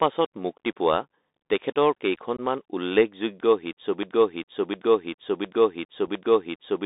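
Speech heard through a Bluetooth CVSD headset codec: everything sits within roughly 250 Hz to 3.7 kHz, with the scratchy sibilants and granular hiss of a 64 kbps one-bit delta stream. Unconcealed Bluetooth headset packet loss leaves abrupt holes, about 19 ms at 2.37 to 2.40 s, fitting a handful of lost packets, and 7.5 ms at 6.07 s, fitting a couple. From 4.03 s to the end, a broken-record loop replays the same 0.71 s fragment four times back to back, most likely because the player or stream stalled and kept resending its last buffer.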